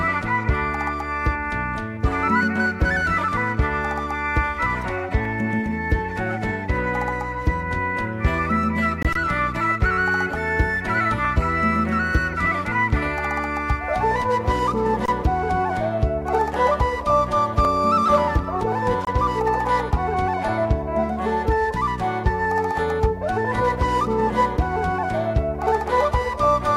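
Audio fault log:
9.03–9.05 s and 19.05–19.07 s, gap between chunks: the sound stops dead for about 23 ms at each point, then resumes with nothing missing, as if each 10 s block of audio were played back with a small delay before the next. The hard on and off edges make it a brief, clipped hole. On a waveform each appears as a flat silent strip with abrupt walls; a spectrogram shows a thin vertical blank band across all frequencies, repeating 10 s apart.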